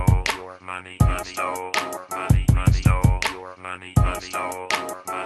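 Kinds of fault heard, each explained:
Nothing stood out on listening, with the audio carrying only the ordinary coding character of the call path it passed through.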